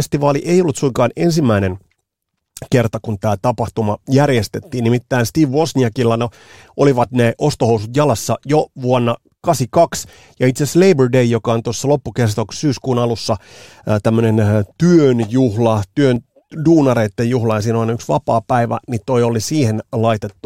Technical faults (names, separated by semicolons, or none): overlap between stream segments